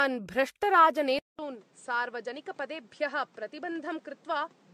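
Throughout this speech clip the sound is swirly and hollow, with smeared, blurred consonant onsets and a watery texture that seems worse than a single pass of a 64 kbit/s AAC-LC encode would leave. That points to generation loss, most likely from the audio being decoded and re-encoded with AAC several times, perhaps around four. Each new encode quantises on a shifted frame grid, so the noise and missing spectral patches from earlier passes pile up. At 1.19 s there is a gap of about 200 ms, and from then to the end the sound is duller and boxier, with nothing above roughly 9.1 kHz. It is also about 10 dB quieter and sits over a new noise floor about 30 dB below it. This is likely an input switched to a poorer device, such as a headset's call profile, whose narrower band, lower level and own hiss take over at the switch.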